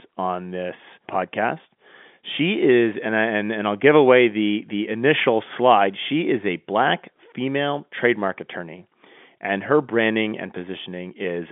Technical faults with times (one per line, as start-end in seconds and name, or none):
none